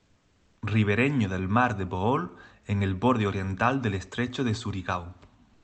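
From the start to 0.61 s, and again from 5.53 s to the end, the real background gives way to comfort noise, a flat, featureless hiss about 3 dB and then about 1 dB quieter, likely from Opus discontinuous transmission filling the pauses in speech.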